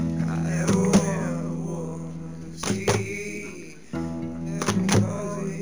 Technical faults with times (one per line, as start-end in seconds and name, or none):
0.00-5.62 imaging from linear upsampling